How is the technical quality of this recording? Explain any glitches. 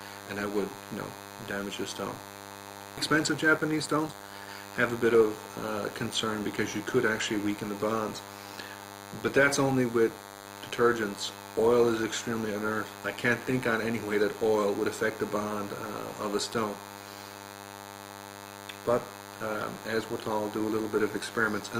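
Technical quality is compromised by a constant interference buzz and two timing glitches near the start.

A DECT cordless phone buzz runs throughout, a thin 100 Hz tone rich in harmonics, roughly 15 dB below the programme. A nearby handset's 10 ms radio bursts are rectified; unlike mains hum, it sounds raspy, not smooth.

At 2.97 to 2.99 s there is a skip ahead. About 700 ms of audio was discarded and the two sides are spliced with no silence, unlike a dropout, which leaves a gap.

From 3.07 to 5.38 s a jitter buffer speed-up runs the audio at 116% to shed an excess of about 400 ms. The pitch stays put, which distinguishes it from a sample-rate error.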